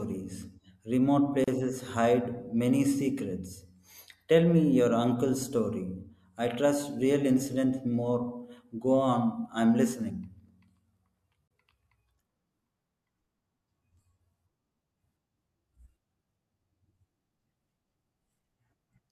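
Separately encoded pieces of this speech were joined without trimming the encoder's start delay and end padding, leaving a gap at a join of encoded pieces every 10 s: 1.44 to 1.48 s (35 ms) and 11.48 to 11.51 s (31 ms). Each is a brief dropout with smeared edges before the sound resumes where it stopped.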